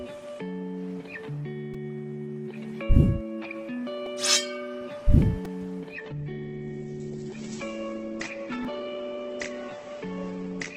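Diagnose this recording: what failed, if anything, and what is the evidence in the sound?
Repeated buffer at 1.74, 4.06, 5.45 and 8.65 s: driver or buffer stage. Brief buzzy clicks where late audio forced a replay, fitting a 128-sample buffer.

Adaptive stream at a lower bitrate from 5.95 s to the end: network stage. Treble vanishes above 8.2 kHz, consistent with a switch to a low-bitrate Opus stream.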